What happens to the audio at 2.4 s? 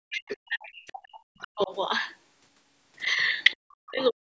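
Nothing goes wrong at 2.4 s: the speech carries on intact through that moment, with only the ordinary call-microphone processing in the path, which trims the lowest bass and leaves nothing above 8 kHz.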